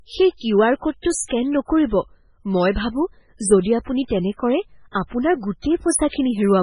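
Across the whole clip the speech sounds watery and swirly, with nothing above 10.6 kHz, from heavy MP3 compression, likely at a very low bitrate near 16 kbps. Pre-echo smears hiss ahead of sharp attacks at 1.01–1.05 s before "স্কেন নকৰিব মই ভাবোঁ", 4.91–4.95 s after "আপুনি তেনে কৰে", and 6.08–6.13 s, as block-wide quantisation noise spreads 36 to 44 ms early.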